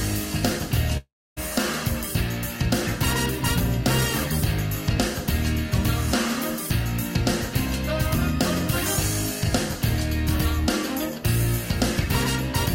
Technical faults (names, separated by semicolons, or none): long network dropout